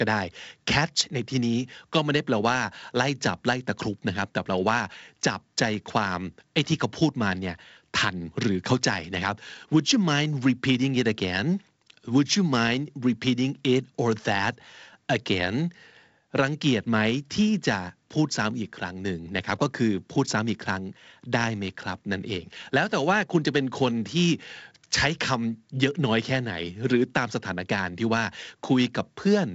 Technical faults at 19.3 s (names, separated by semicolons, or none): none